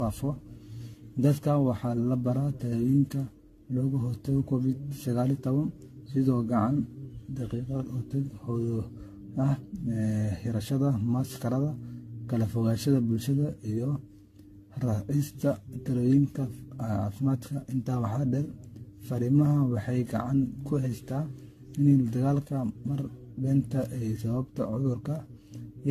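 Generation loss runs through the whole speech recording: swirly, hollow smearing with blurred consonant attacks and nothing above 14 kHz, likely from around ten rounds of lossy re-encoding, consistent with AAC-LC near 64 kbit/s, each pass adding fresh quantisation noise on a shifted frame grid.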